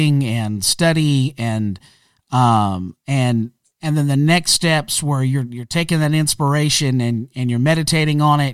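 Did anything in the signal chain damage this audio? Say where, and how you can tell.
Yes: likely unsynchronised converter clocks, about a thousandth apart, slip one sample roughly every 20 ms, producing clock slip clicks as a soft rattle from 0.11 s onward.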